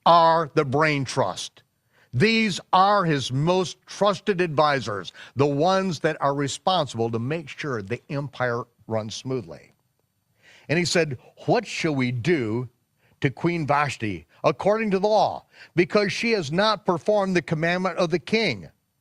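Nothing in the speech stood out as a technical problem on listening.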